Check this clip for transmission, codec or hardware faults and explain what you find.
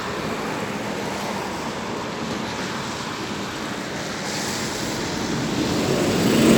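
Nothing in the audio points to a transmission, codec or hardware problem. No fault can be heard at any point in the clip.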